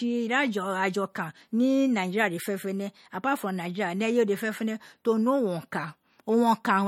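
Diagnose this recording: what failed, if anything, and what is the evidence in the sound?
Codec stage, throughout: the speech sounds watery and swirly, likely MP3 compression dropping weak frequency lines to fit about 46 kbps.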